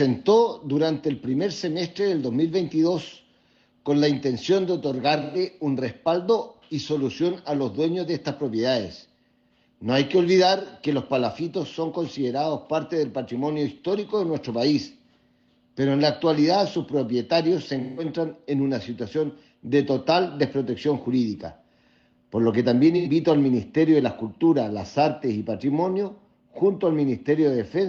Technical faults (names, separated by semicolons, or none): AAC frame loss with concealment